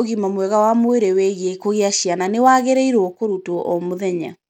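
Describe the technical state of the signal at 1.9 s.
At 1.9 s the speech carries Bluetooth SBC compression damage, present throughout. Treble flickers and grit rides the sound, likely from starved high sub-bands, which fits roughly 96 kbps.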